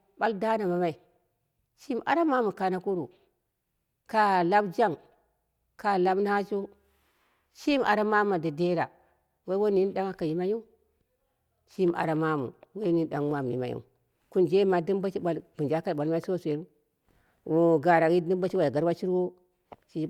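Nothing technical goes wrong anywhere in this speech recording, so there's no fault to point to at any moment.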